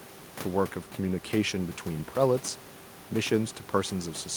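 No technical faults can be heard at any point in the speech.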